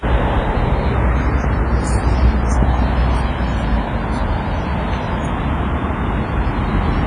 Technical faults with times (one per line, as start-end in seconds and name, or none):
0.00-7.07 WMA compression